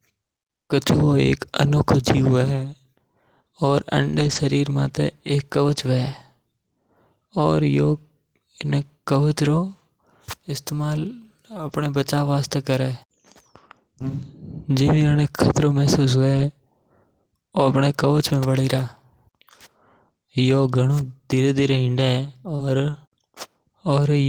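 At 4.11 to 4.37 s, just before "शरीर माथे", then at 5.75, 11.67, 15.37, 16.33 and 21.73 s (after "धीरे धीरे"), lost packets were rebuilt from error correction. Low-bitrate copies fill each hole, so there is no gap, but those stretches sound rougher and noisier. At 22.55 to 22.62 s, a short concealed packet loss continues the preceding sound for about 35 ms, with one rebuilt packet at 22.59 s inside it. This leaves a brief smear and stretches the timing by a few milliseconds.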